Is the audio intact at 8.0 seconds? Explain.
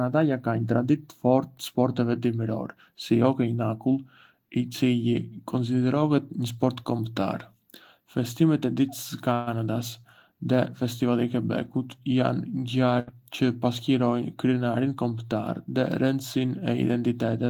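Yes, the speech at 8.0 seconds plays through intact, with no dropout, click or distortion at that moment.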